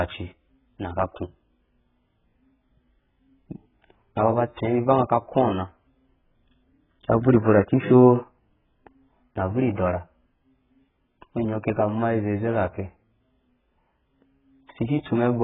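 Heavily dulled speech with nothing above 3.8 kHz, plus a warbling, smeared texture on sustained sounds and sibilants throughout. This is likely AAC compression: an AAC-LC encoder starved of data, which fits a very low bitrate around 8 kbps, lowers its cut-off and quantises coarsely. At 9.76 s a brief hiss of about 15 ms comes just before a sharp attack, softening it. This is pre-echo, where quantisation noise spread across a transform block leaks into the quiet moment before the onset.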